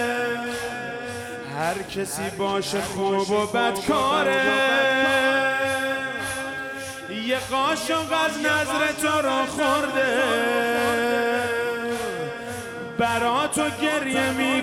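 No technical faults can be heard anywhere in the audio. There is no moment in it that calls for a time or a value.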